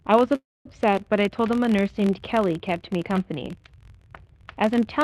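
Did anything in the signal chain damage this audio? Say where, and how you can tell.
Yes. A filter restarted on every block runs throughout: a buzz near 43.1 Hz tracks the level, fitting 1024-sample buffers where each block's filter starts from silence.

A call audio freeze sits at 0.35 to 0.67 s: sound stretches then goes silent for about 230 ms before resuming intact, likely a jitter buffer running dry on the network.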